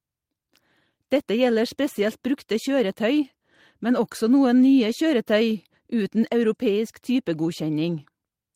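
Nothing in this bit of speech gives a listener anything to flag, since no technical fault turns up anywhere along the way.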